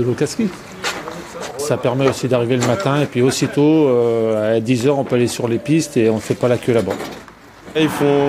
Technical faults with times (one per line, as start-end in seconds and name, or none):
none